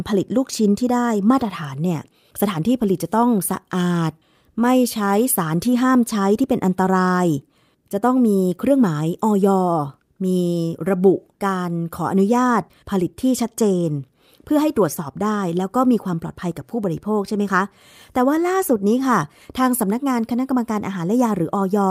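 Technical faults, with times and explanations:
No technical faults are audible anywhere in this recording.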